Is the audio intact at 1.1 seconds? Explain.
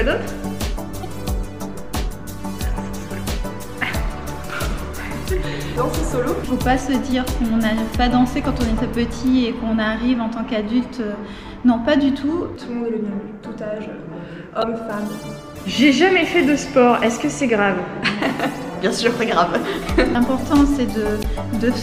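No. At 1.03 to 1.05 s there is damaged data in a compressed stream. Part of the encoded data is corrupt. The decoder misreads those frames, loses sync and hunts for the next frame header. The result is a brief chirp or blip.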